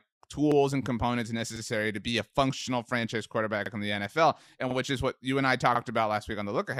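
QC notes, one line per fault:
0.52–0.56, 1.56–1.61, 2.61–2.66, 3.66–3.71, 4.71–4.76 and 5.76–5.80 s, overlapping chunks: at each 1 s chunk join, the next chunk starts about 48 ms early, so that sliver of speech plays twice, giving a brief stutter and click roughly once a second. Nothing goes missing and no silence appears, which separates it from dropouts or underruns. The doubling is confined to each join rather than trailing every sound, which separates it from echo.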